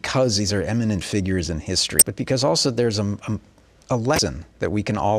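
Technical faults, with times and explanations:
1.99–2.02 s and 4.16–4.19 s, damaged data in a compressed stream: in the speech after "are eminent figures in", and again later, a corrupted stretch of the encoded stream makes the decoder misread frames, lose sync and hunt for the next valid header. Each event lasts about 30 ms and is heard as a brief disturbance in the speech, before "but because also there's" in the first case. A spectrogram shows a short break in the harmonics, and the waveform shows an abrupt discontinuity.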